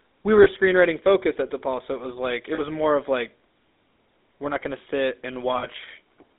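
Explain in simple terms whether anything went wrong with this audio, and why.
The call went through the GSM full-rate codec, which rebuilds speech crudely and drops everything above about 3.7 kHz, leaving voices buzzy, gravelly and muffled throughout.

There are also lost GSM frames: the phone repeated the last good piece, so the sound briefly rings metallically. This happens at 0.44 to 0.47 s after "we were", at 2.54 to 2.60 s after "it was like it", and at 5.58 to 5.67 s after "we're not gonna sit".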